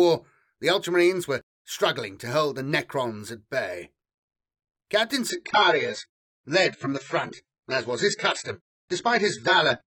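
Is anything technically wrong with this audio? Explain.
Yes. From 5.30 s to the end of the clip, the speech is carried by an adaptive stream at a lower bitrate. The stream switched to a cheaper encoding when the connection slowed, and the change is abrupt with no gap. Treble vanishes above 8.1 kHz, and the encoder's coarser quantisation makes the remaining speech sound duller and more artefact-laden. The change is consistent with a step from an AAC stream near 96 kbit/s to one near 16 kbit/s.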